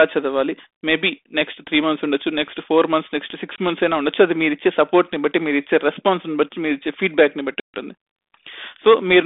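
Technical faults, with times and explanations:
3.56 to 3.58 s and 7.60 to 7.74 s, packet loss on an ADPCM call. The speech drops into hard-edged silence, 20 ms and then 140 ms long. That fits about one lost packet, then about seven. The 32 kbit/s G.726 link, band-limited to about 250 Hz to 3.6 kHz, codes differences from a running prediction. A gap desynchronises the decoder's predictor and step size from the sender's. So the speech comes back distorted until they realign.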